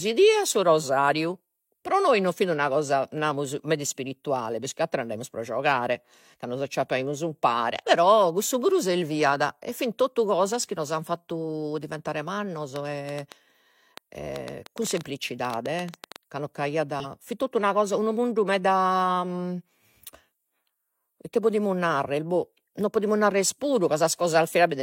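From 12.76 to 16.17 s, right after "an fatu diventare mannos" and ending before "ca non", a train of clicks runs over the speech. The clicks arrive at an irregular pace, about 6.5 per second, around twenty in all, each a similar sharp pop peaking about 10 dB above the speech. They tick through the pauses as well as the words, which points to an external source injecting pulses, likely electrical interference or a faulty connection or power supply.

At 17.00 to 17.06 s, between "ca non" and "fit totu una cosa", there is a brief blip from damaged data in a compressed stream. A short stretch of the encoded data was corrupted, so the decoder misread the affected frames and lost sync until it found a valid frame header again. The result is a 58 ms disturbance that briefly replaces the speech.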